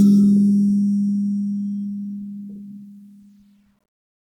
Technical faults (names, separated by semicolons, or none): none